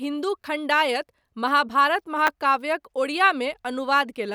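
At 0.42 to 0.44 s, just before "खण्डायत महाभारत", a repeated buffer occurs: fresh audio arrived late, so the playback device sent the same 10 ms block two extra times, costing about 20 ms of sound. At 2.27 s, right after "खण्डायत महाभारत", it happens again with one extra play. With so small a buffer, each event is heard as a brief buzzy click rather than a clear stutter. Unlike a dropout, nothing goes silent; the same fragment repeats with hard joins.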